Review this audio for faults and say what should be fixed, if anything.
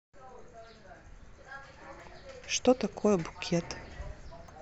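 Damaged data in the compressed stream causes two brief glitches in the speech, at 2.00 s and from 4.48 to 4.50 s. Corrupted frames cannot be decoded correctly. The decoder loses sync and hunts for the next valid frame. Verify file integrity and use error-checked transfer or storage.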